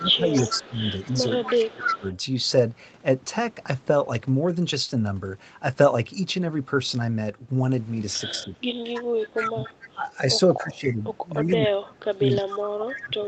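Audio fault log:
0.0–2.06 s, 8.44–8.69 s, 9.34–10.08 s and 10.62 s to the end, speech suppressed in double talk: the voice dips and chops in pieces, by about 15 dB early on and up to about 25 dB near the end. This is likely the echo canceller clamping down while both sides talk at once.
0.0–2.18 s, 8.95–9.93 s, 10.85–11.53 s and 12.33–12.97 s, echo leak: a copy of the voice trails it by 286 ms, at about 10 dB below at first and about 15 to 20 dB below later. This is likely loudspeaker pickup that the far end's canceller didn't fully remove.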